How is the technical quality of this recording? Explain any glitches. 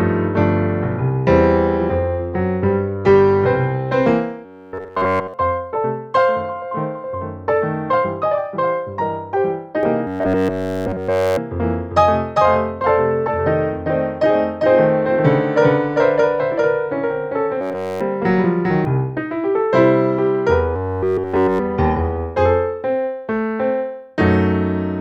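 The recording has clear technical faults: four bursts of robotic buzzing and a long stretch where the audio is doubled.

Robotic sound from repeated short buffers appears at 4.45–5.34 s, 10.07–11.38 s, 17.61–18.01 s and 20.76–21.59 s. The likely cause is that new audio arrived too seldom, so a fragment of roughly 10.7 ms was looped in place of the missing material. That produces a rigid, metallic 93.8 Hz buzz. A spectrogram would show evenly spaced harmonic lines at multiples of 93.8 Hz, and the waveform would show an identical short cycle repeating.

A doubled audio track runs from 9.83 s to 18.85 s. A second full-band copy, at roughly the same level, trails the original by about 0.4 s, likely from a slower second capture path or copies left misaligned. It sounds like a dry, abrupt echo. A spectrogram would show every event repeated 0.4 s later, and the waveform's envelope would appear twice.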